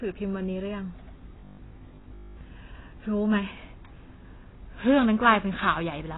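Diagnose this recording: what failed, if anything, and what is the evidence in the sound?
The codec stage is where this went wrong: the speech shows the marks of AAC compression at a very low rate, likely AAC-LC running somewhere near 16 kbps. Nothing survives above 3.9 kHz, so consonants lose their edge and sibilants turn dull and smeared, with a fizzy, warbling texture throughout. The encoder, starved of bits, discarded the upper band entirely and coarsely quantised what remained.

At the driver or buffer stage, audio stopped arriving on time from 1.39 to 2.41 s, and the gap was most likely covered by replaying the last short buffer while the real audio was skipped. The result is robotic sound from repeated short buffers: a rigid, metallic buzz locked at 50 Hz over most of that second. That pitch fits a buffer about 20 ms long being looped.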